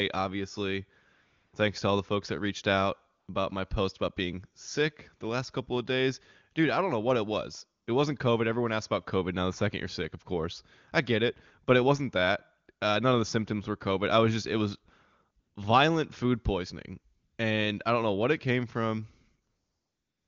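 AMR comfort noise replaces the pauses at 1.13 to 1.53 s, 3.19 to 3.27 s, 7.83 to 7.87 s, 15.39 to 15.55 s, 17.15 to 17.37 s and from 19.47 s to the end. The phone stopped sending speech frames, and the receiver synthesised a steady, smooth hiss in place of the real background. A dropout would go dead silent, but here the noise never stops and simply switches texture at each gap. The wideband speech between gaps stays clear, which points to a high AMR-WB rate such as 23.85 kbit/s.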